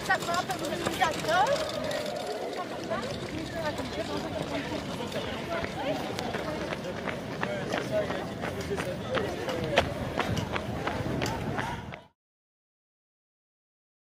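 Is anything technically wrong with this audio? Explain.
No, nothing is technically wrong with this audio; the level simply fades out smoothly near the end, from around 11.5 s to 12.16 s.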